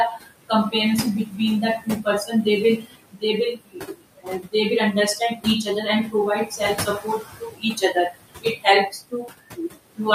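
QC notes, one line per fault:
Throughout: noise suppressor artifacts. The suppressor pushes the room noise, which sits only about 11 dB below the speech, down by about 21 dB in the gaps and lets it back up under the speech.
0.16 to 0.74 s, 1.26 to 1.39 s, 1.78 to 2.46 s, 2.77 to 4.54 s, 4.93 to 6.14 s, 6.46 to 10.0 s: speech cut by the noise suppressor. Soft consonants and word endings were taken for noise and pulled down with it, by up to about 22 dB, so they sound swallowed. The heaviest losses, roughly a second of speech each, fall in 2.77 to 4.54 s and 6.46 to 10.0 s.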